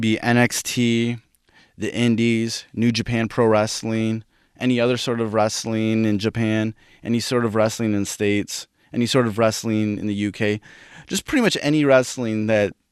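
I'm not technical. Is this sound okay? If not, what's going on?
No. Near the very end, from about 12.56 to 12.72 seconds, the speech breaks into brief blips of noise. This is DAB burbling, a fault of digital radio when reception is weak. Some of the broadcast data arrives damaged, and the error correction cannot repair all of it. The damaged bits put short blips of noise into small slices of the sound. That garbles the sound for a fraction of a second.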